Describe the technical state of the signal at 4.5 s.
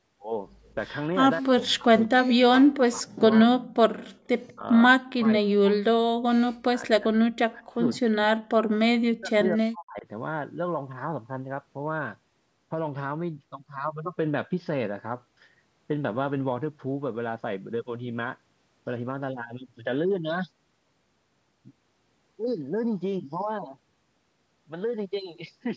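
At 4.48 to 4.52 s a faint, delayed ghost of speech slips in underneath the main talker, very quiet relative to the speech and arriving about 204 ms behind its source. This is an echo leak: the far end was most likely playing the call over a loudspeaker, and its echo canceller failed to remove all of what its microphone picked up. That residue traveled back down the line as a short echo.

Overlapping it, from 4.49 to 4.66 s, the talker's speech sinks sharply, with a deep drop and roughly 150 ms affected. This is speech suppressed in double talk. Both sides were likely speaking at once, and the echo canceller could not separate the near-end talker from the loudspeaker echo, so it pulled both down together, hollowing out the speech for that brief stretch.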